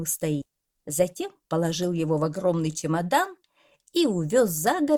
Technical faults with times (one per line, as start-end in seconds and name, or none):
0.41-0.43 skip ahead
0.99-1.55 jitter buffer speed-up